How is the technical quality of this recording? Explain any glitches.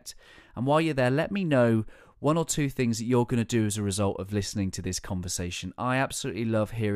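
The technical quality of this recording is sound, with no glitches to explain.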